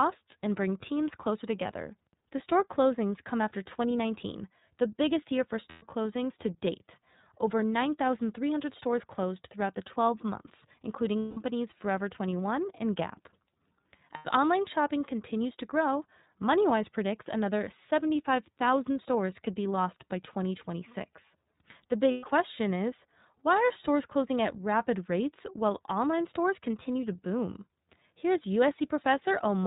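Speech carried over the iLBC codec, whose sound fits its 13.33 kbps, 30 ms-frame mode, is cut off above 4 kHz and comes out audibly rough and synthetic. Lost iLBC frames at 5.69–5.83 s, 11.19–11.38 s, 14.16–14.26 s and 22.11–22.27 s, lasting 90 to 180 ms, are concealed by a repeated, noise-mixed pitch cycle, heard as a brief buzzy held vowel before clean recovery.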